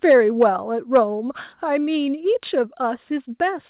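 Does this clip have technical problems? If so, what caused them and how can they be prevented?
Yes. Microphone overload appears at 0.10–0.15 s, 0.41–0.43 s and 0.95–0.98 s. The loudest peaks sound flattened and crackly, running about 2 to 3 dB past the converter's limit. A sizeable share of samples is cut off. An input gain set too high is the likely cause. Lower the microphone gain before the call.

The microphone volume stepped down at 0.43 s, 1.44 s and 2.46 s. The level drops suddenly, by about 2, 1 and 2 dB. The first step follows a clipped peak directly. This is likely the call software's automatic gain control reacting to overload. Setting a sensible input level beforehand prevents these corrections.

The narrow sound with nothing above 4 kHz fits a G.711 A-law call path at 64 kbps.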